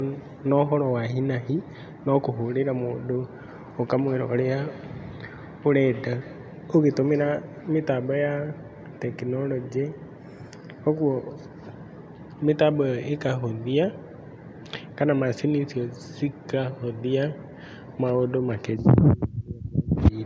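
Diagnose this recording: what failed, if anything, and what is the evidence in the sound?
Feedback echo between two devices, a call-processing failure, from 3.48 to 7.49 s. The speech returns at a fixed interval of roughly 200 ms, peaking about 18 dB below the direct level. That fixed spacing distinguishes it from room reverberation, which decays smoothly without discrete repeats.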